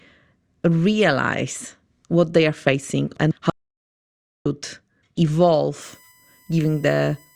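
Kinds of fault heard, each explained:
Audio dropout to silence, 3.5 to 4.46 s: Just after "facing and", the speech stops dead and about 0.96 s of silence follows, with no room tone underneath, before the speech resumes mid-flow. That silence points to the input being lost while the recorder kept writing empty samples, likely from a momentary disconnection, link failure or accidental mute. Whatever was spoken in that gap is not recoverable.
USB whine, 5.82 s to the end: A steady, fixed-pitch whine appears, built on 1 kHz with its strongest component at the 2 kHz harmonic, sitting roughly 35 dB below the speech. The 1 kHz basis matches the USB bus's 1 ms frame timing. The current drawn on each frame leaks into the audio path through shared power or ground and is heard as this constant tone beneath the speech.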